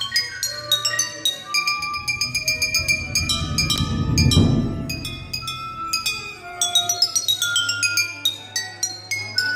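At 3.7 to 3.78 s the sound briefly jumbles: chunks out of order. One 20 ms block plays late, after the blocks that should follow it, which fits a delay of about three blocks. Nothing is missing, but the reordering leaves three hard joins, heard as a garbled stutter.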